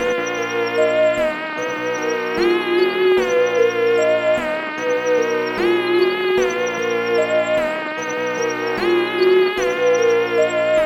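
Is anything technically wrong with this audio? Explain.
No, nothing technically wrong can be heard in this audio. The signal holds steady throughout, with no audible faults to point to.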